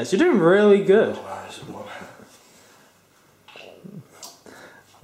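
Nothing in this clip stands out as a technical fault; it just runs along without any glitches worth pointing to.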